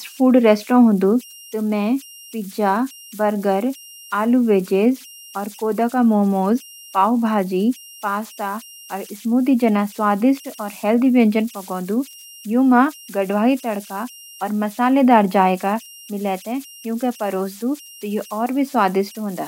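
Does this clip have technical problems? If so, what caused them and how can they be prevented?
Yes. Converter idle tones run throughout the speech: an undithered delta-sigma converter falls into repeating bit patterns at low input levels, producing a whistle around 3 kHz, about 25 dB below the speech, audible in pauses and as grainy noise under quiet passages. Adding dither to the converter breaks up these patterns and prevents the tones.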